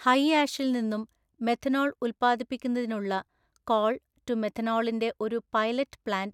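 No technical faults can be heard anywhere in this speech recording.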